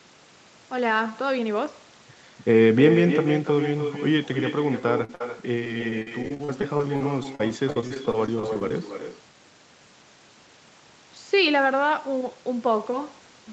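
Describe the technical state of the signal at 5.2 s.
At 5.2 s the signal sits inside a burst of packet loss running from 5.15 to 5.21 s. A short run of audio never reached the receiver in time, so the decoder extended the last sound for about 52 ms while fading it, then skipped ahead, leaving about 60 ms of the original missing. A voiced sound turns into a brief held buzz that dies away, and the sound then jumps on abruptly. On a spectrogram the harmonics flatten into smeared, steady horizontal bands that fade, followed by a hard vertical seam where normal detail returns. The waveform shows a decaying, oddly regular stretch ending in a discontinuity.

The echo with no canceller runs through the whole clip, including this moment. The far end's loudspeaker output leaked back into its microphone and nothing removed it, so the talker's speech is trailed by a quieter copy about 7 dB down, delayed by roughly a third of a second, sounding thinner. 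On a spectrogram each speech pattern, already capped near 8 kHz by the call path, appears a second time, fainter, shifted right by that delay. The waveform shows a smaller duplicated envelope lagging each burst.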